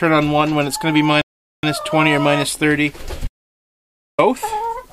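At 1.22 s the player drained its buffer of downloaded audio and had to wait for more data, producing a rebuffering stall. The sound halts into silence until 1.63 s, then picks up exactly where it left off, so nothing is skipped but about 0.42 s is added.

From 3.28 s to 4.19 s the input signal was cut off, likely a lost link or device while recording continued, giving an audio dropout to silence. The sound breaks off mid-flow into silence without room tone, and about 0.91 s of material is missing when it returns.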